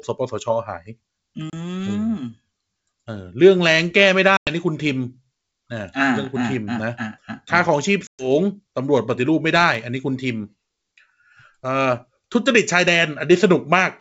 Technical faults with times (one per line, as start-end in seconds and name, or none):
1.50-1.54 packet loss on an ADPCM call
4.37-4.51 packet loss on an ADPCM call
8.07-8.30 packet loss on an ADPCM call